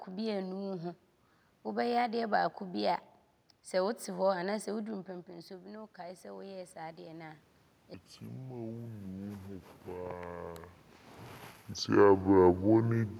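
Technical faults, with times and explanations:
4.79 to 7.46 s, automatic gain rising: Around 5 s the talker moves away, and the input level falls by about 14 dB. The gain control hears a quieter signal and slowly turns itself up, by about 5 dB over more than two seconds. The voice climbs back gradually. The room noise rises with it, because the gain lifts everything at the microphone together. That shared swell marks the fault as gain control, not a change in the talker.
7.94 to 13.2 s, section at the wrong speed: From 7.94 s to the end, the speech plays at 0.556 times its proper speed. Pitch and pace drop together, so the voice turns deep and dragging, roughly ten semitones low. The shift is abrupt, not gradual. This likely comes from the audio being played against the wrong clock rate. A level change near 11 s, from the talker moving again, sits inside this slowed section.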